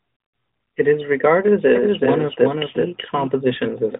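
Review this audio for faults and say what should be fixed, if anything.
Doubled audio track, 1.75 to 3.27 s, just after "is regarded": a second full-band copy of the speech runs roughly 0.4 s behind, about 5 dB quieter, with no decay, and cuts in and out abruptly. This is likely a second capture via a slower path, heard through the narrowband phone band. Route each source through a single capture path so it can't be mixed in twice.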